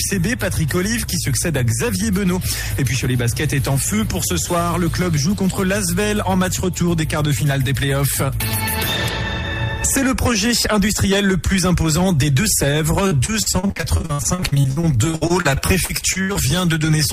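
From 13.07 s to 16.37 s, repeated packet loss (robotic sound) sets in. Over this roughly 3.3-second stretch, data keeps arriving late or not at all, and each hole is papered over by extending the preceding sound. About 30% of the span is this concealment, and the longest gap lasts 73 ms. The result is choppy audio with chunks missing. A spectrogram shows dozens of vertical breaks alternating with smeared, frozen-looking bands, and the waveform has abrupt level steps.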